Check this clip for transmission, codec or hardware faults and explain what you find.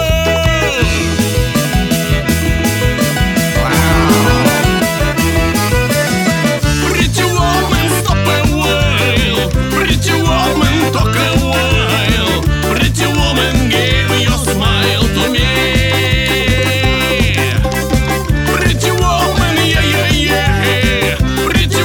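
Nothing faulty turns up anywhere in the recording.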